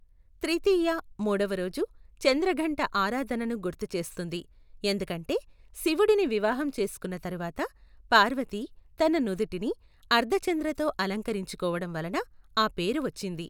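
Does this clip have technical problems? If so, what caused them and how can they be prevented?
No, the speech signal shows no technical faults anywhere in the clip.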